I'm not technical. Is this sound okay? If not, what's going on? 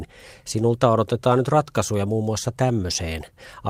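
Yes, the recording comes through without any technical problems that a listener would notice.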